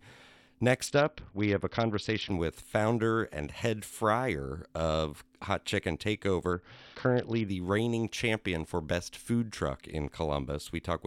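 Bluetooth SBC bit pool drops hit this speech clip from 0.87 to 2.32 s, ending before "with founder and head", and from 6.53 to 7.48 s, before "reigning champion for best". Treble dulls and gritty noise rises, which fits the bit pool falling from 31 to about 7, near 61 kbps, starving the upper sub-bands.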